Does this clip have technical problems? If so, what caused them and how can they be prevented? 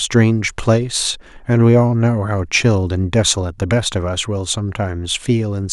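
No, the speech signal stays intact throughout, with no audible technical faults and so nothing to trace to a cause or guard against.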